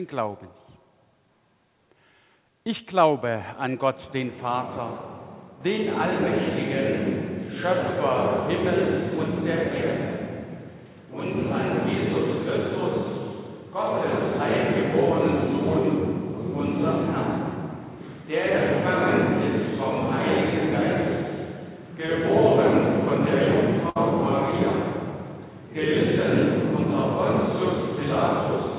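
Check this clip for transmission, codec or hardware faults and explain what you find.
Two transmission faults stand out, both packet losses near the end. The audio runs over a G.711 mu-law call path at 64 kbps, so nothing is heard above 4 kHz.

From 22.06 to 22.10 s there is a short concealed packet loss. About 20 ms of audio never reached the decoder in time. The receiver covered the hole with about 18 ms of sound extended from what came just before. It then blended back into the real signal. The result is a brief smear or wobble.

From 23.90 to 23.97 s there is a burst of packet loss. About 60 ms went missing in one run. The receiver kept the preceding sound going for about 56 ms and faded it down as the gap went on. That fill comes across as a short held buzz or fading hiss. The audio then picks up further along, with the part in between simply absent.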